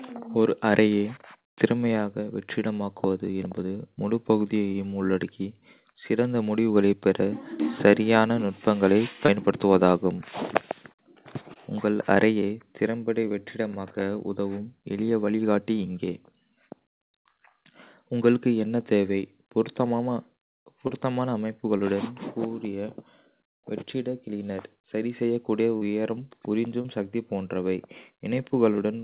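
Speech over a narrowband call path with nothing above 4 kHz, showing short concealed packet loss at 9.26–9.30, 11.54–11.57, 20.87–20.91, 21.77–21.81, 25.77–25.83 and 26.81–26.86 s. Each is a brief smear where missing audio, consistent with one or two lost 20 ms packets, was extrapolated.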